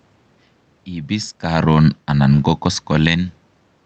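From 1.13 s to 3.21 s the speech sinks steadily by about 5 dB, and the room noise beneath it drops right along with it. That is automatic gain falling: the gain control judged the input too loud, or its background noise too strong, and gradually lowered its gain.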